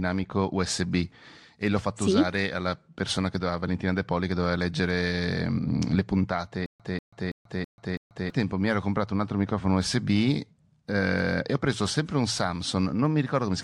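A stalled stream, likely retrying its last buffered fragment, causes a stutter with silent gaps in this speech recording from 6.66 to 8.30 s, just after "le puntate": a 190 ms burst repeats five times at a 328 ms period with 137 ms of digital silence between, losing the audio before "mi ero comprato un".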